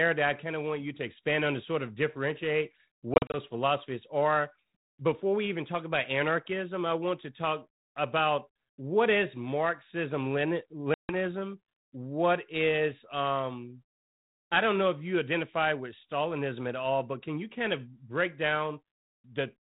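Packet loss on an ADPCM call, carried as 32 kbit/s G.726: from 3.14 to 3.36 s about 110 ms drops out in short gaps (longest 40 ms), then 150 ms at 10.94–11.14 s. Silence fills each hole, the decoder's predictor loses step, and speech resumes slightly distorted before settling.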